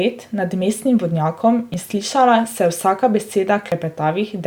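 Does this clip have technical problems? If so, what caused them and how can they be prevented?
Yes. There are two tiny skips with audio missing between chunks, at 1.74 s (between "nad mestnim vodnjakom" and "in slišala") and 3.72 s. About 20 ms vanishes each time, with no gap left. These are likely chunk-boundary losses every 2 s. The waveform shows an abrupt jump and the spectrogram a sharp vertical seam. Prevent this by buffering continuously across chunk handovers.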